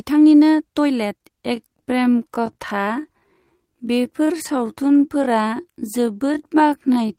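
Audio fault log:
1.50–7.19 s, time-stretched section: from 1.50 s to the end, the speech abruptly slows to about 0.57 times its original pace while its pitch stays put, and it drags, with syllables drawn out. This is likely software lengthening the passage to fill a longer duration, holding pitch steady by repeating short slices of the waveform.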